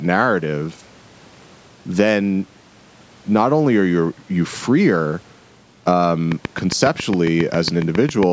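From 6.32 to 8.24 s there's a train of clicks, about fifteen regular ticks at 7.3 per second, roughly 15 dB above the speech, likely interference from nearby equipment.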